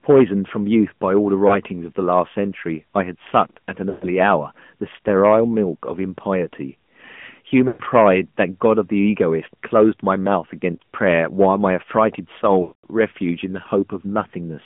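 Throughout, the speech passes through the AMR narrowband mobile codec. Only about 150 Hz to 3.4 kHz survives. The voice sounds buzzy and synthetic, which fits the 10.2 kbps mode. Lost AMR speech frames cause brief warbles at 1.48 and 10.76 seconds. At 3.90, 7.68 and 12.62 seconds, longer losses stretch and fade the sound before the speech returns rough.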